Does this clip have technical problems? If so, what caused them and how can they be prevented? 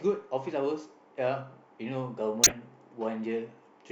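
Yes. A corrupt frame was decoded from 2.43 to 2.52 s: flipped bits in what sounds like a few compressed frames were decoded anyway, producing a loud, misplaced burst peaking around -10 dBFS. Error detection with concealment of damaged frames, rather than playing them, would prevent it.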